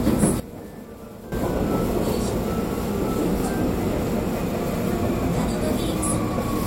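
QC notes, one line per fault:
0.4–1.32 s, sudden gain jump: The level drops by about 13 dB at 0.4 s and snaps back at 1.32 s. Sound and background noise fall and return together, with no ramp. A gain change was likely applied between samples without smoothing.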